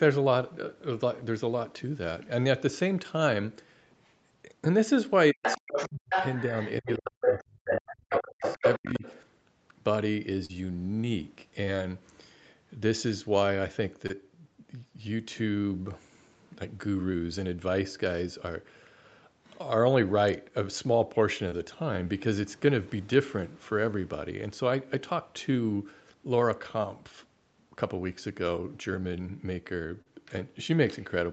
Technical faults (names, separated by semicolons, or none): speech suppressed in double talk; other side's voice leaking through; short concealed packet loss